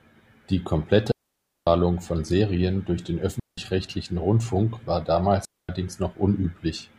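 Digital wireless dropouts at 1.12–1.67 s (0.55 s), 3.40–3.58 s (0.18 s) and 5.45–5.69 s (0.24 s): the receiver lost data and muted the speech, leaving clean near-silent gaps without noise bursts.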